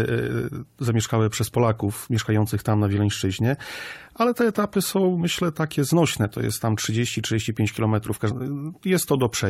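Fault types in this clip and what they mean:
Damaged data in a compressed stream, at 8.30 s: a corrupted stretch of the encoded file makes the decoder misread those frames and lose sync while it hunts for the next valid frame header, producing a sudden blip lasting under 20 ms.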